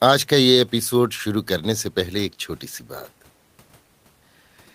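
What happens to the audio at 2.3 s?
Nothing goes wrong at 2.3 s: the speech continues intact there, with only the faint room noise well beneath it.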